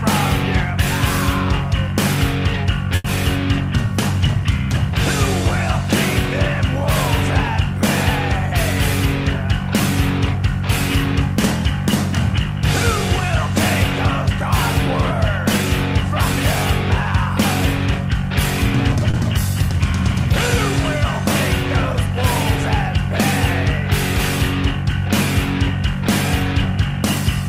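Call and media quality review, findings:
Short stall from a late packet, 2.95–3.06 s. Packet late, jitter buffer emptied. Receiver held the last sound for about 90 ms, then resumed where it stopped. Nothing dropped, but playout now runs 90 ms behind. Audible as a smeared sustain with a slight buzz or dip.

Short stall from a late packet, 19.11–19.16 s. Same jitter-buffer underrun, smaller: 30 ms of stretched fill, no loss, delay up another 30 ms. A brief held sound with a slight buzz or dip.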